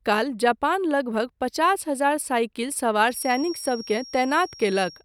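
Speech clip with a feedback whistle from 3.05 s to the end: a thin, single-pitch 5.6 kHz tone roughly 20 dB under the speech, likely a loudspeaker-to-microphone loop sitting just at the edge of feedback.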